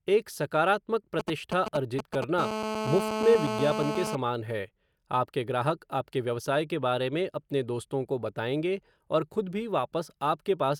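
From 1.19 to 2.24 s, just after "एक सकारात्मक", GSM signalling bursts appear: a nearby 2G phone sends short groups of radio bursts at 217 Hz, which the audio circuit rectifies into a galloping dit-dit-dit of brief buzzes, sitting a few decibels under the speech.

From 2.39 to 4.15 s, ending just before "है आपके ग्राहक आपके", a GSM phone buzz follows as the phone transmits in bursts 217 times a second during a call. The rectified 217 Hz bursts give a hard, raspy, harmonic-rich buzz, nearly steady and about 3 dB below the speech.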